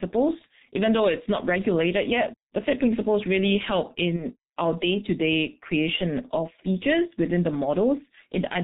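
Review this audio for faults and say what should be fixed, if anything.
The whole recording passes through the G.723.1 codec at about 6.3 kbit/s, heavily damaged: nothing above 4 kHz, slow 30 ms frame updates, so speech is muffled and hoarse, with blurred consonants.

From 4.16 to 4.25 s, between "principles really help" and "our day to day", VoIP packet loss concealed by the speech codec appears. The decoder extrapolates over a gap that fits one lost 30 ms frame, producing a fading buzzy tone or coloured noise before the voice recovers.

To prevent this, use a wideband, higher-bitrate codec with a jitter buffer and forward error correction on the network path.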